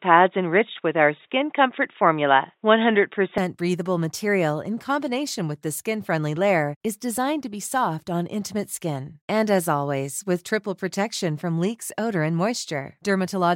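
From the start to 3.38 s the speech is dull and boxy, with nothing above 3.8 kHz, likely from an input switched to a poorer device. It opens up without a gap before "breathable material in combination", and the level shifts by roughly 5 dB along with the tone, which a plain filter wouldn't cause.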